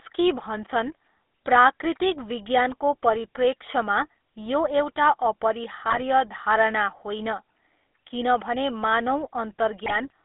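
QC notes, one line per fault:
throughout: GSM full-rate codec. The sound is held to a band of roughly 250 Hz to 3.6 kHz and carries a steady buzzy, gravelly grain, which fits a 13 kbps full-rate encoder. The codec rebuilds speech from a vocal-tract filter driven by a coarse, regularly spaced pulse excitation that keeps only one sample in three, so harmonics come out rough and rasping. A plain narrowband filter would sound muffled but clean. This roughness is the codec's signature.
5.89 to 6.02 s and 9.84 to 9.95 s: GSM bit errors. Each burst, about 0.13 s and 0.11 s long, breaks into squawks, pops and gargling. This points to a few consecutive frames corrupted at error rates of about 1.77 and 2.5 percent. Flipped bits in the filter, pitch or gain parameters bend the spectrum and make the level jump for each affected frame. Packet loss would leave gaps or smoothed repeats, but here the decoder plays garbled parameters as loud, distorted noise.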